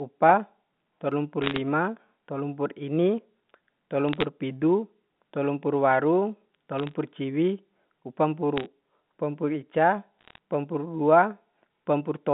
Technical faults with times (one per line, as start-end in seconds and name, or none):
1.42-1.58 bit errors on a digital phone line
4.09-4.24 bit errors on a digital phone line
6.79-6.94 bit errors on a digital phone line
8.57-8.66 bit errors on a digital phone line
10.19-10.38 bit errors on a digital phone line